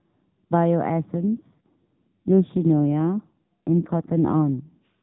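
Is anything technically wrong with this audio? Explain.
Yes. From 1.00 to 4.51 s there is an AMR rate drop: the mobile codec falls to a lower mode, which sounds like roughly 12.2 down to 5.9 kbps, spending bits on error protection. The speech turns buzzier and more synthetic, but unlike a dropout or a bandwidth switch, there is no gap and the narrowband 4 kHz ceiling stays the same.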